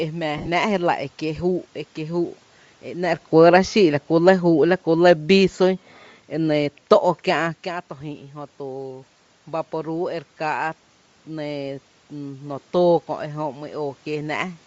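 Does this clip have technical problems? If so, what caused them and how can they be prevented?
Yes. The speech throughout has a breathy, grainy edge with a thin, noise-filled top end, likely caused by Bluetooth LC3 compression. This is the LE Audio codec coding the voice in short transform frames and replacing discarded upper-band detail with synthetic noise, which fits a bitrate around 32 kbps with 10 ms frames. Unlike the room noise, this graininess follows the voice and vanishes with it. Using a higher LC3 bitrate, or a wired or higher-quality link, would prevent it.

Between 0.38 and 0.49 s there are lost LE Audio frames. About 80 ms of audio is missing across a 100 ms span, in short gaps of which the longest is roughly 40 ms. The decoder covers each gap by repeating the last spectrum with scrambled phase, so the voice becomes a brief noisy smear rather than a clean dropout to silence, as a plain gap would be. 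Stronger radio conditions, less interference and a shorter distance to the receiver would prevent it.

From 3.35 to 5.89 s the automatic gain is falling. The level sinks by about 4 dB over more than two seconds, and the background noise drops with the voice. That shared, gradual drop separates it from the talker moving around 3.0 s, which changes the voice alone. Setting the input gain manually, or lowering the microphone level so the control never decides the signal is too loud, would prevent it.

From 11.27 to 14.62 s the automatic gain is rising. The input became about 11 dB quieter, and the control slowly raised its gain by about 3 dB over several seconds, so the voice and the room noise swell together. A talker moving, as around 7.5 s, changes only the voice, not the background. Fixing the gain, or keeping a steady microphone distance so the level does not sag, would prevent it.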